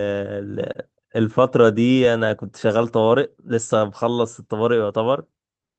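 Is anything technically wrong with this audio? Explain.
Yes. There are three related timing faults in this speech.

Clock drift between sender and receiver runs throughout. The sender's clock is roughly 2% slow, so the receiver's buffer keeps draining and needs constant correction.

Repeated timing corrections run from 0.24 to 5.59 s. The receiver repeats short pieces to fill the gap, stretching playback to 98% speed and adding around 150 ms.

A short stall from a late packet occurs at 0.72 to 0.77 s. The buffer ran empty, so the last sound was held for 24 ms. Nothing is lost, but the held sound comes with a slight buzz or dip.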